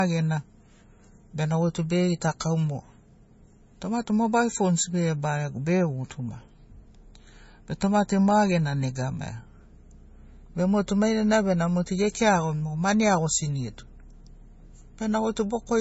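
From start to finish the speech stops dead around 7.6 kHz with swirly low-bitrate MP3 smearing, likely low-bitrate audio saved at a high bitrate, which fits a roughly 25.6 kbit/s original.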